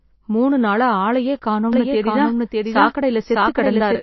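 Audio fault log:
Throughout, MP3 compression: likely a low-bitrate encode starving the spectrum, so nothing survives above 5.8 kHz and weak detail swirls and smears audibly.
1.73 to 4.02 s, doubled audio track: a second full-level copy likely joins abruptly about 0.7 s behind and runs to the end, repeating the sound as a dry echo.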